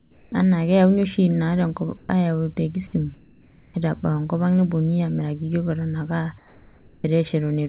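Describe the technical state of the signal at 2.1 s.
Right at 2.1 s, a brief pause from 1.97 to 2.09 s has just ended: its real background was replaced by a flat, featureless hiss about 5 dB quieter. This is likely comfort noise in place of the background, synthesised by the receiver while the sender stopped transmitting during the pause.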